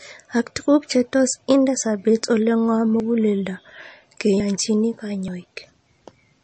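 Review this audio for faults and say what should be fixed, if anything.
The whole recording has a watery, swirly quality, and nothing comes through above 8.3 kHz. That's likely MP3 compression starved of bits, which fits something near 35 kbps. The encoder chops the treble and lets weak detail flicker between frames. Encoding at a higher bitrate, or keeping the file uncompressed, would prevent it.

There are three small skips, at 3.0, 4.4 and 5.28 s. Each is the sound jumping ahead, losing roughly 40 ms with no gap of silence. That's likely a dropped buffer (overrun): the software didn't read its samples before the hardware overwrote them. Giving the capture thread a larger buffer or higher priority would stop it.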